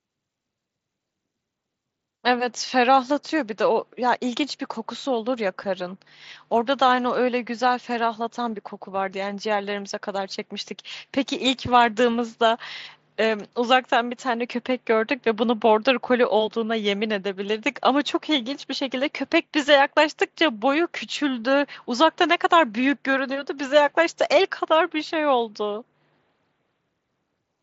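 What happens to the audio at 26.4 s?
Nothing goes wrong at 26.4 s: the speech carries on intact through that moment, with no dropout, click or distortion.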